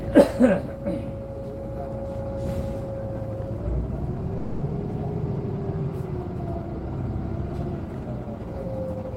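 At 4.37 s a call audio freeze holds the last sound as a fading buzz or hiss for about 240 ms. Likely a packet delay emptied the jitter buffer. Nothing is lost; everything after 4.63 s runs 240 ms late.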